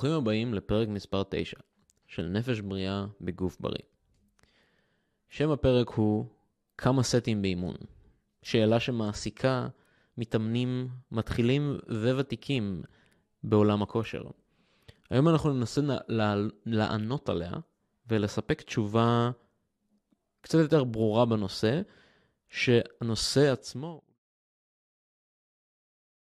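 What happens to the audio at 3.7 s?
Nothing goes wrong at 3.7 s; the speech there is intact, with no dropout, click, distortion or level change.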